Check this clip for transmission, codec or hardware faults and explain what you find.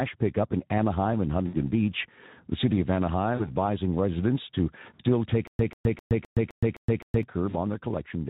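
There are three problems here in this speech clip.

Speex coding runs the whole way through. At around 11 kbps the excitation is starved of bits, so the voice comes across noisy and hoarse, with any upper-band content reduced to shaped hiss rather than real detail. The codec damage is plainly audible.

VoIP packet loss concealed by the speech codec hits four spots: 1.47–1.56 s, 3.35–3.51 s, 4.93–5.02 s and 7.49–7.55 s. The decoder keeps extrapolating its last pitch and filter while lowering the gain, so each dropout turns into a fading buzz or coloured noise. The gaps are about 60, 40, 60 and 20 ms, which fits three, two, three and one 20 ms frames.

A stutter with silent gaps runs from 5.47 to 7.23 s. A 140 ms fragment repeats seven times on a steady 258 ms cycle, with about 118 ms of dead digital silence between repeats. That's most likely a stalled stream replaying its last chunk on each retry, and whatever should have played there is gone.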